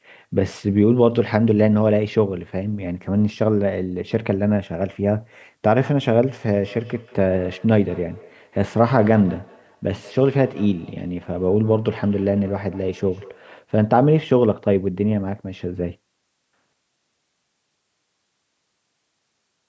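A speech recording with feedback echo between two devices from 6.52 s to 13.53 s. Each phrase comes back at a steady interval of roughly 200 ms. The repeats sound thinner and more ringing than the original. At their loudest they sit about 22 dB below the speech. The cause is two devices on the same call in one room. One plays what the other's microphone sent, and that microphone picks it up again. Each echo canceller only removes its own device's playback, so the loop survives.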